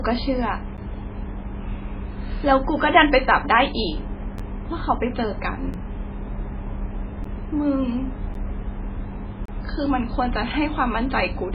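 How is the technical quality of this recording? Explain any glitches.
Technical quality is poor: the speech is band-limited and watery throughout, and six brief dropouts interrupt it.

MP3 compression, likely at a very low bitrate around 16 kbps: nothing above 5 kHz survives, and heavy bit-starved coding leaves swirly, smeared consonants across the clip.

Blocks of digital silence occur at 0.77, 4.38, 5.73, 7.24 and 8.34 s, and from 9.46 to 9.48 s. Each is a hard cut to silence, heard as ticks or, for the last, a short hole. Four last about 10.7 ms, which fits a 512-sample buffer missed in time. The 5.73 s gap lasts about 7.3 ms, and the 9.46 s gap about 28 ms.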